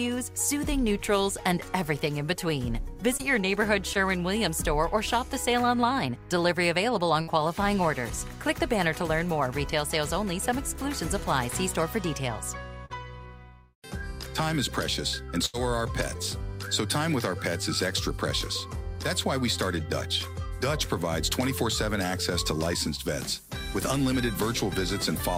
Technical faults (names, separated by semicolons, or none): short concealed packet loss; burst of packet loss